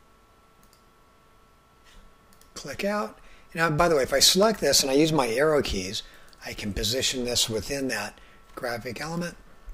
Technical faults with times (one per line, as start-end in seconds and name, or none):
4.43 dropped samples
6.79 dropped samples